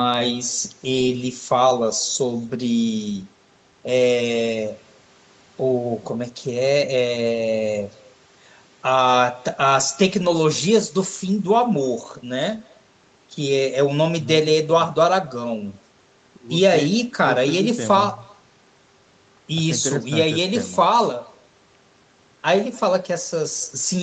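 Speech that has been through a call, with an echo with no canceller running through its whole length. The far end played the call over a loudspeaker. Its microphone picked that sound up again and sent it back. Every phrase is followed about a third of a second later by a faint copy, about 28 dB down. The copy sounds thin. That delay reflects the network round trip. Nothing in the path removed the returning signal. The call band stops at 8 kHz, which fits an Opus codec at around 32 kbps.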